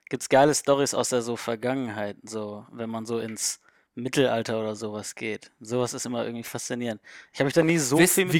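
At 1.01 to 1.03 s, just before "der so", a loud pop cuts through the speech, and at 7.62 to 7.71 s a second one arrives as a quick double pop. Each most likely comes from a voltage spike, such as a plug, switch or static discharge, hitting the signal path. Both peak roughly 10 dB above the speech, which continues underneath. On a waveform they are narrow spikes, and a spectrogram shows thin vertical broadband stripes.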